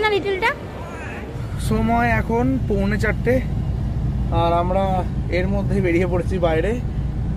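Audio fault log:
No faults detected on listening; nothing to log.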